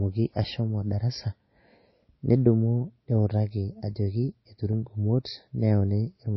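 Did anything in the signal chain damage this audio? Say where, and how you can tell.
Yes, at the codec stage. The speech stops dead at 5.8 kHz throughout. This is likely low-bitrate MP3 audio saved at a high bitrate, which keeps the original cut-off.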